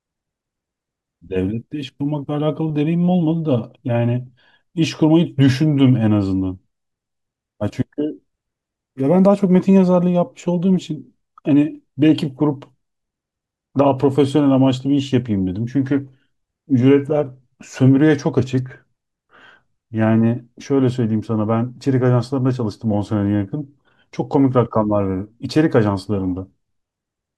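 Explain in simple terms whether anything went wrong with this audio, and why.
At 25.51 s the speech has a block of digital silence, about 3 ms long. The sound drops to nothing and returns instantly, with no fade. That sudden cut makes a small tick. The gap's size fits a 128-sample buffer left empty.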